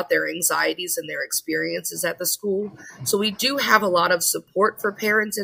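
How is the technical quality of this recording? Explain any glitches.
No glitches or technical faults can be heard anywhere in the recording.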